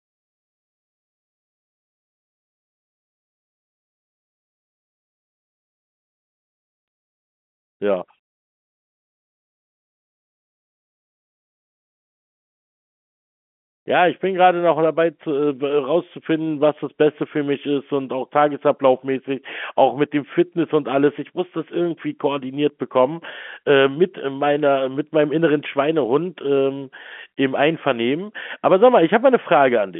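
Nothing is technically wrong with this speech clip.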